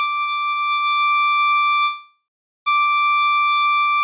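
At 1.84 s the music stalls into a fading buzz, then silence, until 2.69 s. It then resumes intact. This call audio freeze is likely from delayed packets draining the jitter buffer. The narrow, 4 kHz-limited sound fits a G.711 call path.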